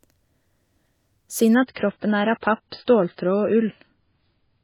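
Speech clip, and at about 1.55 s it switches abruptly to a noticeably worse version and stays there until the end at 4.64 s. That's an adaptive stream at a lower bitrate: the player stepped down to a cheaper encode, presumably as the connection slowed. There's no gap, but the top end vanishes, with nothing above 5 kHz, and the codec artefacts thicken. That fits a drop from roughly 128 kbit/s MP3 down to something near 16 kbit/s.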